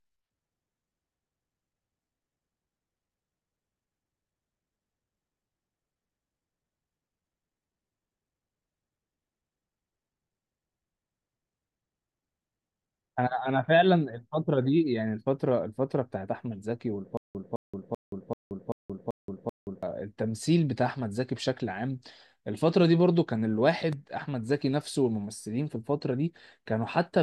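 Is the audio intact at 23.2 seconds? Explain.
Yes, the speech at 23.2 seconds is intact, with no audible fault at that moment.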